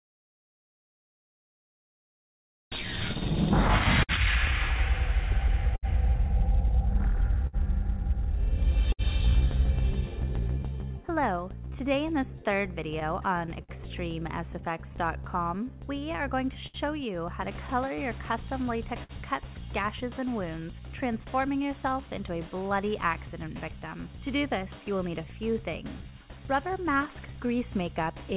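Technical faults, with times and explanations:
Throughout: clock drift between sender and receiver. The sending clock runs roughly 5% slow, so the jitter buffer keeps draining. The receiver stretches or repeats short slices to cover the shortfall, producing small timing hiccups at uneven intervals through the 4 kHz-limited G.711 call audio.
2.23–9.02 s: scattered short gaps. About ten late or lost packets, the longest near 70 ms, were patched by extending the preceding sound. Roughly 400 ms in total is concealed, heard as brief ticks and smeared moments in otherwise continuous audio.
12.36–19.12 s: scattered short gaps. Another run of about ten isolated packet losses, again up to roughly 70 ms each, filled by continuing the last waveform. Around 300 ms is concealed, giving short hiccups and smearing scattered across the span.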